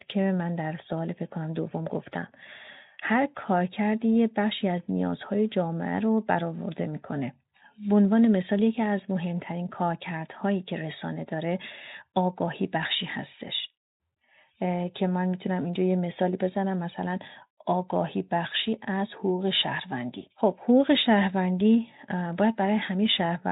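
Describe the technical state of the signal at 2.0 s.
At 2.0 s the speech signal is intact, with no fault present at that moment.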